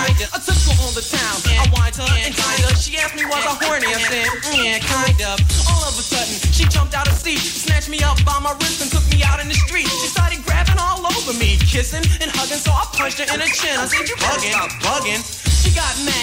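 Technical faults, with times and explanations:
7.10 to 7.24 s, loose connector crackle: a short, irregular burst of crackle and scratching lasting about 140 ms. It points to a worn or dirty contact somewhere in the cable or jack that was disturbed at that moment. As the contact shifted, it connected and disconnected many times in rapid succession, chopping the signal into fragments with abrupt edges. Those hard cuts and reconnections are what the ear hears as the rough, scratchy crackle.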